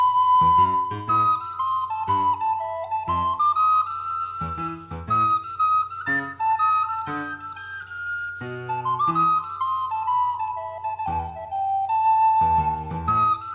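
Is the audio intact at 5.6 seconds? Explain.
Yes, the audio is intact at 5.6 seconds, with no dropout, click, distortion or other fault at that point.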